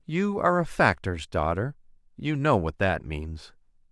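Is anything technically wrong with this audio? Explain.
No, nothing technically wrong turns up anywhere in this speech recording.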